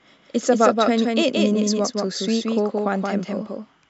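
Throughout the speech, a doubled audio track trails about 200 ms behind, roughly 5 dB quieter, likely from a second capture path; unlike room echo, it stays full-band with no decay.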